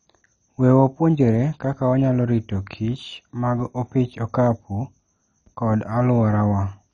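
Throughout the speech, heavy damage of the kind MP2 compression likely leaves: nothing above 10.3 kHz, upper sub-bands flickering on and off, and a gurgling, granular roughness that fits a starved bitrate near 32 kbps. Unlike a simple low-pass, the dullness comes with shifting band dropouts and coarse grit.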